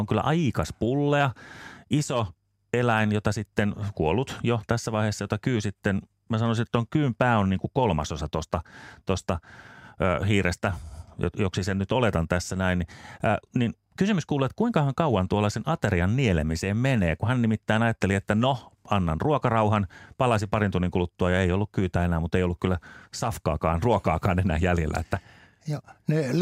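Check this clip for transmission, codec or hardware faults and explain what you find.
Nothing stands out in this speech recording, so there's no fault to report.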